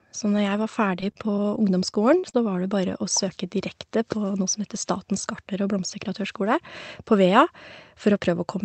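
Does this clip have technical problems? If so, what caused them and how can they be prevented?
Yes. Repeated packet loss (robotic sound) runs from 0.36 to 2.62 s. Nine short holes, the longest 41 ms, are each filled by extending the preceding sound, so roughly a fifth of a second is rebuilt and the speech turns choppy and robotic. A steadier network connection, with a larger jitter buffer and forward error correction turned on, would prevent it.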